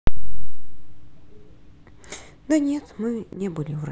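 Near the end, from 3.33 to 3.41 s, the speech abruptly drops by about 6 dB for roughly 80 ms and then snaps back. The likely cause is one channel dropping out: with one stereo side briefly lost, the mono sum keeps only half the shared signal.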